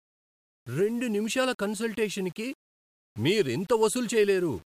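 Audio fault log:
Throughout, low bit depth without dither: the speech carries a grainy, rasping distortion that tracks its level. Quiet passages turn gritty, and the softest moments collapse to silence or sputter between two steps. This likely comes from rounding the samples to roughly 7 bits with no dither, so the rounding error moves with the signal as distortion rather than a steady hiss, sitting only around 30 dB below the speech.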